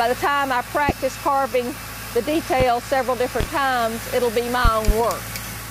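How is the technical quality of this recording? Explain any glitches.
The recording is marred by loud pops. Single pops land at 0.89–0.93 s, 2.60–2.64 s and 3.41–3.44 s. A double pop follows at 4.65–4.92 s. Each is a sharp thump standing well above the sound, which carries on underneath. The likely cause is a sudden voltage pulse, from a plug, switch, static discharge or driver glitch, added to the signal. The circuits after it shaped that pulse into the brief, percussive pop.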